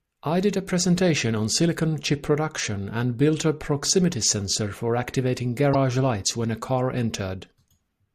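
Broken MP3 bit reservoir at 5.73–5.75 s in this speech clip, between "proximity sensor for activating" and "lights when a car": the audio jumps ahead with a brief glitch, likely from frames missing before a frame whose data pointed back into them, which fits roughly 24 ms frames.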